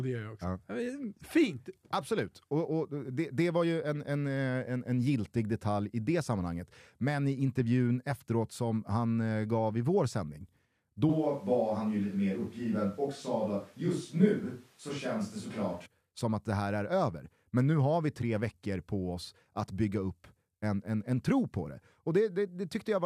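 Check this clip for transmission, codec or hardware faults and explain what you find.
One hardware-side fault is audible: a switch to a distant microphone from 11.1 to 15.9 s. The close microphone's feed most likely dropped out, leaving only a pickup further from the talker. The speech abruptly turns roomy and hollow, with thinner bass, at much the same level, and room noise roughly 35 dB below it, before snapping back to the close sound.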